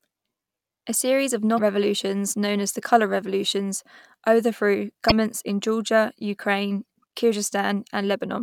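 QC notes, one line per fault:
1.55–1.59 s and 5.08–5.12 s, damaged data in a compressed stream: corrupted bytes made the decoder misread its frames and lose sync until it found the next valid header. Each 40 ms break, after "series of" and after "the colour revolutions overthrew", comes out as a brief glitch.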